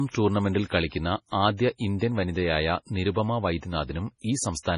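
MP3 compression damage runs through the whole speech clip, and is likely the cause of its watery, swirling texture. Nothing is present above 10.5 kHz, where the encoder has cut the treble outright, and the heavy damage suggests a very low bitrate, around 24 kbps. Starved of bits, the coder drops weaker frequency components that flicker in and out between frames, so sibilants turn metallic and chirpy and consonant attacks lose their edges.

Pre-echo appears at 0.88 to 0.92 s, 1.99 to 2.01 s and 3.84 to 3.89 s, as a short hiss that arrives just ahead of a sharp onset, spreading about 39 ms, 25 ms and 55 ms respectively. Each time, the attack fell late in a transform block, and the quantisation noise sized for the loud part was smeared across the quiet moment before it, softening the onset.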